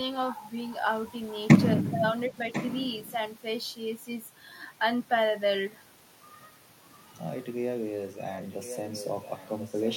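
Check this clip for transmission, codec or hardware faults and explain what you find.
Two kinds of fault are audible, both tied to echo cancellation on a loudspeaker-using end.

Echo leak at 0.70–0.76 s, 1.31–1.39 s and 2.52–3.14 s: a residual echo the canceller likely failed to remove returns as a copy delayed by 1.04 s. The first two scraps sit faintly, about 20 dB down. The last is nearly as loud as the speech, only about 5 dB down.

Speech suppressed in double talk at 2.29–2.37 s: with both sides active, the canceller likely attenuated the talker too. The speech briefly dips by about 15 dB for roughly 70 ms.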